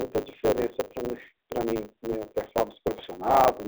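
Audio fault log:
Throughout: block size mismatch (truncated). Each block's tail is discarded, leaving a 100 Hz buzz and speech running 1.09 times fast at near-normal pitch; waveform shows regular seams, spectrogram a 100 Hz comb.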